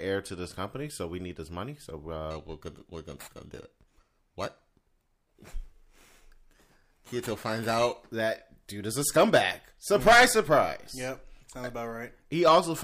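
Speech with periodic clock jitter from 2.31 s to 8.09 s, starting just before "that dude is a". A clock wobble around 3 kHz adds a metallic roughness; a spectrogram shows sideband copies about 3 kHz above and below each harmonic, strongest up high, while the waveform looks unchanged.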